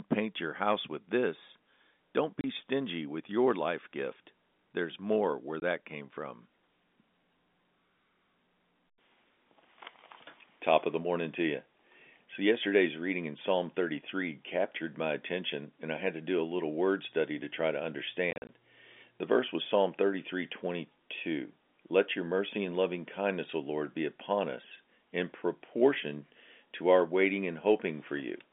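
At 2.41 to 2.44 s before "stingy with your life", 5.6 to 5.62 s between "more where" and "came from", and 18.31 to 18.49 s after "study to try to", packet loss filled with silence cuts hard-edged holes. The 30 ms, 20 ms and scattered 110 ms gaps fit 10 ms packets.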